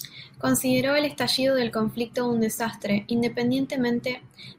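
At 1.37 s the speech jumps forward in a tiny skip, the mark of an overlap between stream segments. Two segments carried time stamps that claimed the same stretch of time, so the player discarded roughly 11 ms as if it were duplicated, although that sound existed only once. On a waveform the trace breaks abruptly with a discontinuity in level and phase. A spectrogram shows a thin vertical broadband stripe where the splice lands.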